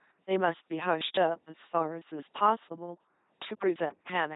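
LPC-10 vocoder damage runs through the whole clip, from start to end. The speech has been reduced to a model: a filter of at most ten poles standing in for the vocal tract, excited each frame by either a pulse train or noise and never a mix. That all-or-nothing choice gives the heavy buzzing, robotic quality, with stray buzz or hiss wherever the voicing call goes wrong. Nothing remains above 3.9 kHz, and the coarseness fits a 2.4 kbit/s rate.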